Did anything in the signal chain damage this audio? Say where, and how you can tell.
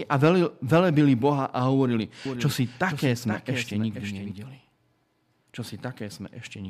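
Yes. From 2.25 s to 4.31 s the speech is joined by a doubled audio track: a second, full-band copy trailing by roughly half a second and about 10 dB quieter. It appears and vanishes abruptly at those times, with no decay, no room colouring and no further repeats, which separates it from acoustic echo or reverb. The likely cause is the same signal being captured a second time through a slower routing or driver path and mixed back in.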